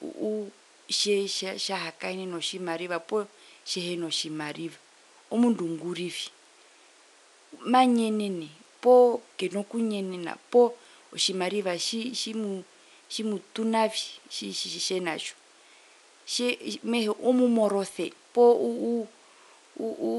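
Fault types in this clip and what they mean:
No technical faults are present in this speech clip. A low background of room noise sits about 31 dB below the speech, which is part of the recording itself.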